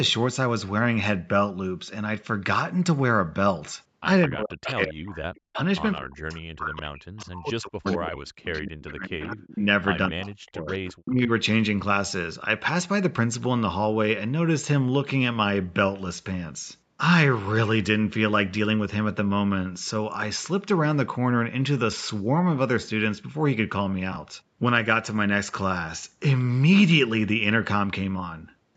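From 4.27 to 5.57 s, and again from 5.99 to 9.66 s and 10.09 to 11.3 s, the speech dips sharply, thins and breaks into pieces, with the deepest drops around 40 dB. This is speech suppressed in double talk, likely caused by an echo canceller that could not separate the near talker from loudspeaker echo while both sides spoke, so it turned everything down. About a second is affected in the first stretch, about three in the second and under one in the third. A spectrogram would show the speech energy punched out in ragged vertical gaps, and the waveform envelope would collapse in uneven bites.

Inside those stretches there is an echo leak, where a faint, delayed copy of the sound returns about 0.21 s after the original. It appears as brief scraps at 4.63, 7.21 and 8.58 s, a longer piece from 7.85 to 8.11 s, and a sustained trail from 10.24 to 10.94 s. These sit roughly 15 to 30 dB below the speech. 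The likely cause is a loudspeaker-side canceller that let part of its microphone pickup through. On a spectrogram it shows as weak, smeared repeats of the speech harmonics, offset in time.

At 24.12 to 24.16 s, chunks out of order produce a short jumbled moment. One 20 ms chunk played a chunk late, so it lands after audio that should follow it, leaving hard joins. The waveform would show abrupt discontinuities at the seams, and the spectrogram would show thin vertical broadband lines.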